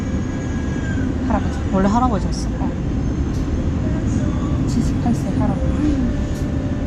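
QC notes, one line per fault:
Nothing stood out on listening to this recording.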